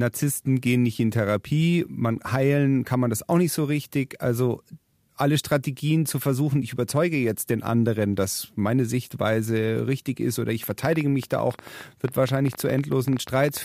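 From 10.64 s to 13.58 s, a train of clicks ticks over the speech: short, similar-shaped pops at roughly 12.3 per second, spaced irregularly, about forty in all, with peaks a few decibels louder than the speech itself. They carry on through the pauses as well. Something is repeatedly injecting brief pulses, likely electrical interference from nearby equipment or a faulty connection or power supply.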